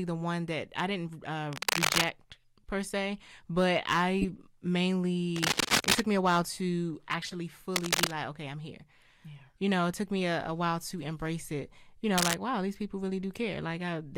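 The whole speech clip is hard clipped. It's being driven about 20 dB past what the chain can pass, so around one percent of samples get their peaks sheared flat. That throws harmonics way up top, and you hear a harsh fuzz on every loud syllable.

At 1.08 s there's a corrupt frame decoded, a single tiny blip. The decoder played a damaged compressed frame and smeared energy to the wrong frequencies.

From 1.53 to 2.05 s comes cable scratch noise, a rough rustling burst sitting about 10 dB over the speech. It's likely a worn cable or connector being moved, with its contact resistance jumping around.

Right after "per se but", from 4.22 to 4.41 s, a longer run of bad frames gives a louder chirpy squeal. More scratching follows at 5.36 to 6.00 s. A further run of corrupt frames squeaks at 7.22 to 7.34 s, then there's another scratch at 7.74 to 8.11 s. A faint blip lands at 9.38 s, just after "okay I'm here". 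A last, gentler scratch, about 5 dB over the signal, runs 12.18 to 12.35 s, right before "wow these people".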